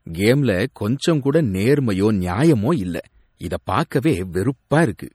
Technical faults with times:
0.00-5.14 MP3 compression

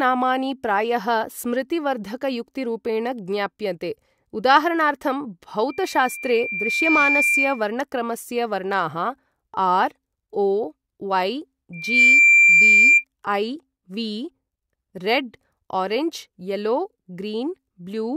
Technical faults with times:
5.69-7.69 loudspeaker feedback squeal
11.73-13.04 loudspeaker feedback squeal

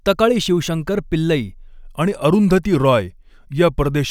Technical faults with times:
1.68-4.10 wrong sample rate

